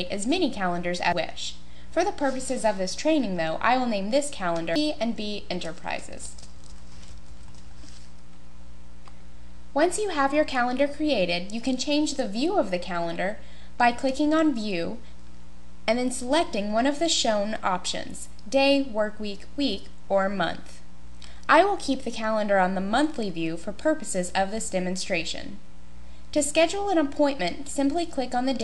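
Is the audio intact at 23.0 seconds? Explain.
Yes, the audio is intact at 23.0 seconds, with nothing there that breaks, distorts or interrupts the sound.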